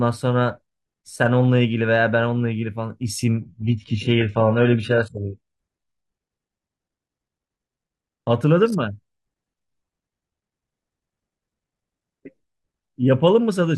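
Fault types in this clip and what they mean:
adaptive stream at a lower bitrate: a slowing connection pushed the player onto a cheaper stream, consistent with HE-AAC near 12 kbit/s. From 3.41 to 5.41 s the speech suddenly loses everything above 11.1 kHz, without any gap.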